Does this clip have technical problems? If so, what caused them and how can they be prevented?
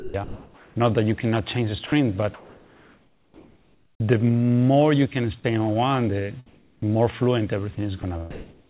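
Yes. Sound dropped by the voice detector: at 0.00 to 0.14 s and 5.40 to 5.44 s the audio gives way to steady noise, likely because the sender's detector judged quiet sound to be background. On a waveform the envelope collapses to a flat, even band. Lowering the detector's sensitivity threshold or adding hangover time prevents this.

Comfort noise in place of the background: from 0.00 to 0.76 s and 6.46 to 6.82 s the real background is swapped for smooth, featureless synthetic noise, about 3 dB quieter in the second span, likely from discontinuous transmission. A spectrogram shows a uniform wash with no fine texture. Disabling DTX avoids it.

Sound chopped by the voice detector: between 1.86 and 4.00 s, and again from 7.75 to 8.69 s, the detector repeatedly switched transmission off and on, likely cutting quiet passages into comfort noise. The waveform shows abrupt gaps and flickering noise patches between bursts. 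Longer hangover and gentler gating would prevent the chopping.

Onset clipped by the voice detector: at 6.80 s a sound starts abruptly without its soft attack, likely because detection lagged by about 20 ms. The waveform jumps straight from flat noise to the sound, with no gradual rise. A faster detector or a look-ahead buffer would preserve the attack.

The G.711 A-law call path leaves nothing above 4 kHz, which shows as an empty region above that line on a spectrogram.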